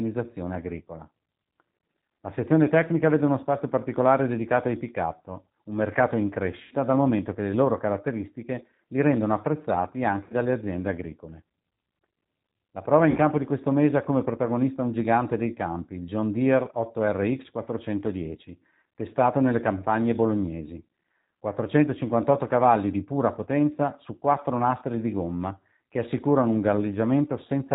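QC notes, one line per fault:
throughout, G.729 codec: audibly rough, synthetic speech with nothing above 4 kHz, because the 8 kbit/s codec rebuilds it from a filter, pitch predictor and sparse pulses.
6.63–6.75 s, 10.24–10.34 s, 13.10–13.18 s, VoIP packet loss concealed by the speech codec: brief buzzy or noisy, fading smears as the decoder extrapolated over roughly 80, 60 and 60 ms of missing audio.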